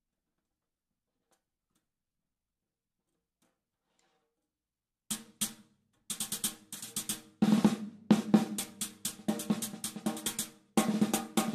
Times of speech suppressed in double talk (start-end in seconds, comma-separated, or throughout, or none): none